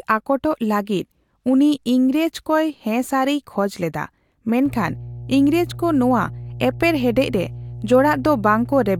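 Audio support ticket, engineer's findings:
Mains hum, 4.66 s to end of clip. Steady 60 Hz tone under the speech, roughly 15 dB below it. Probable ground loop or transformer near the input chain coupling the power line into the signal. Differs from low-frequency rumble or handling noise: fixed, pitched tone at exactly mains frequency, constant level, no fluctuation with movement.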